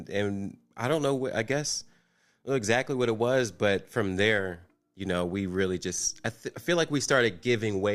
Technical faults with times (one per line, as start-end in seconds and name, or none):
none